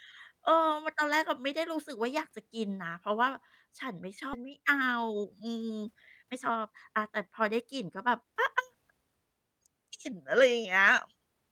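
At 4.33 to 4.35 s the speech skips ahead: about a second of audio that was already queued is discarded, and playback jumps forward with no fill. On a spectrogram, formant patterns break off and resume mismatched at a near-seamless splice, with no silent gap.

From 4.43 to 8.99 s a jitter buffer speed-up follows. The receiver trims short pitch-period slices repeatedly, running at 110% speed with unchanged pitch and removing about half a second, so the speech sounds hurried. Syllables appear compressed in time while harmonic spacing stays constant.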